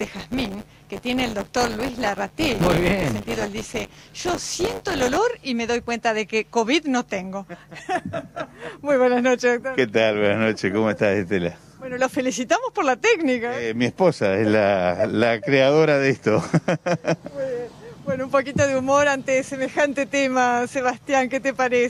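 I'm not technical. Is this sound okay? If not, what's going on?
No. From 0 to 5.17 s there is buffer tearing: playback slips, so each 10 ms chunk partly repeats audio from a moment earlier, causing a 100 Hz robotic buzz.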